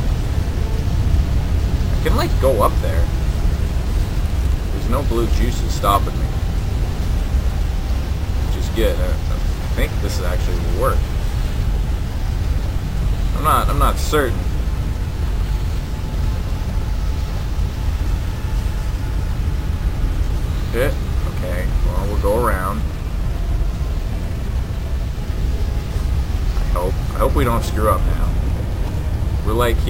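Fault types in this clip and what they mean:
Imaging from sample-and-hold upsampling: the rate was raised by holding each sample for about two output samples with no smoothing filter, which fits a jump from about 22 kHz to 44.1 kHz. A mirrored copy of the spectrum fills 11.03 kHz to 22.05 kHz throughout, sitting about 29 dB below the signal and heard as a bright metallic fizz that rises and falls with the sound. A spectrogram shows the content flipped above 11 kHz, and a zoomed waveform shows small stair-steps.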